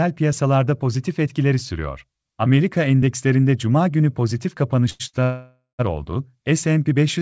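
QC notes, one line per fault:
4.90–5.02 s and 5.08–5.15 s, short stall from a late packet: right after "endekslerinde cuma günü pozitif" the speech hangs twice, first for about 97 ms, then for about 58 ms. Each time a packet arrived late, the jitter buffer emptied, and the receiver stretched the last sound into a slightly buzzy hold. When the packet arrived, playback resumed where it had stopped, so nothing is lost but the timing is pushed back.
5.23–5.81 s, call audio freeze: a longer interruption of about 554 ms follows the same phrase. The speech turns into a fading buzz, and roughly 120 ms of it drops to silence. This is likely packets held up in transit, which drained the jitter buffer so that the receiver had to fill the wait with a decaying continuation of the last sound. Playback then picks up where it left off, within G.722 call audio that has no content above 8 kHz.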